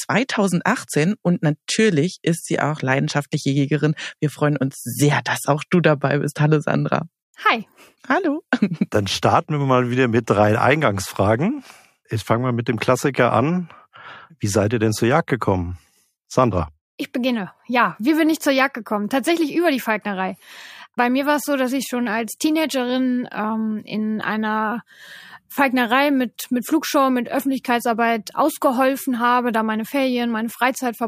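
No technical faults are audible anywhere in the audio.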